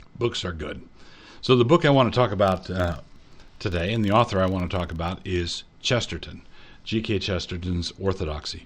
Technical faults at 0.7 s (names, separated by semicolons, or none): none